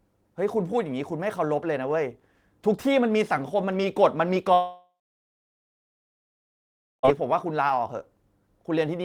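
At 4.53 s the speech gives way to a brief fading buzz and then about 2.1 s of silence, resuming at 7.05 s with 2.5 s missing. This is a long network dropout, likely from packets no longer arriving while the receiver stretched the last sound.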